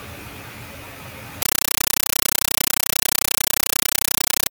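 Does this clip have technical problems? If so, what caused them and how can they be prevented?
Yes. From 1.42 s to the end of the clip at 4.52 s, the speech is replaced by harsh, very loud chattering static: a compressed stream played as audio. The receiving end treated a bitstream, which sounds like an AC-3 stream, as PCM samples instead of decoding it. Each frame becomes a burst of noise about 8 ms long followed by silent padding, repeating at 31.25 Hz. To prevent it, set the source to output PCM, or make sure the receiver decodes the bitstream.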